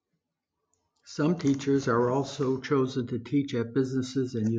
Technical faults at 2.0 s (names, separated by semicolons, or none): none